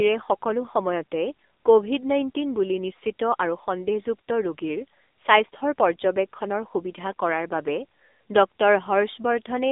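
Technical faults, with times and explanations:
Throughout, AMR narrowband mobile codec: the speech carries the buzzy, synthetic edge of a low-rate AMR-NB mobile link, with damage plainly audible, which fits a rate near 7.95 kbps. The voice is rebuilt from a vocal-tract model fed by sparse pulses, so its natural texture is lost. On a spectrogram the energy sits in a band from 250 Hz to 3.7 kHz, with a hard ceiling and nothing above 3.8 kHz.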